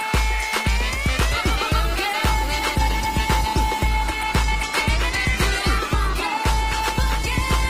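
Around 1.29 s the audio suddenly drops in quality with no gap: codec artefacts rise, an adaptive stream dropping to a lower bitrate, sounding like Opus falling from about 64 to 16 kbit/s through to the end.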